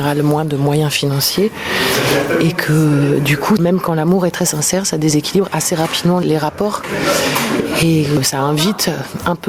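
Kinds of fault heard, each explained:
Gain pumping: all through the clip, the gain ducks around 20 dB under loud sounds, likely a fast limiter on overdriven gain.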